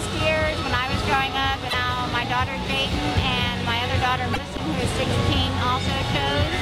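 At 1.66 to 1.74 s and again at 4.30 to 4.38 s, damaged data in a compressed stream makes the decoder misread frames and lose sync, giving brief glitches about 80 ms long. Each appears as a short, abrupt break on a spectrogram.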